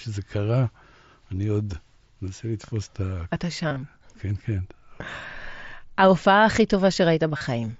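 Between 3.69 and 3.76 s the speech shows concealed Bluetooth headset packet loss. About 52.5 ms of audio goes missing, scattered across roughly 75 ms, with the longest run 22.5 ms. The receiver fills each gap by repeating a closely matching stretch of the preceding waveform, so the sound turns briefly buzzy and steady at full level, then warbles slightly as real audio resumes. At 7.37 to 7.41 s a 37.5 ms loss does the same. A plain dropout would fall silent or click. This one stays filled, and it sits within the 8 kHz-wide mSBC band.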